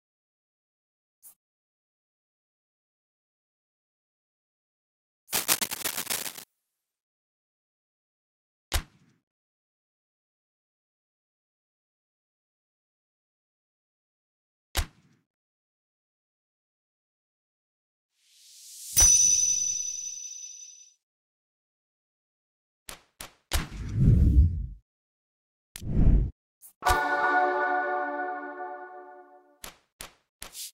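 Cable scratch noise from 5.32 to 6.44 s: dense, uneven rustling bursts sit just below the sound, likely a worn connector or cable shifting and changing its contact resistance.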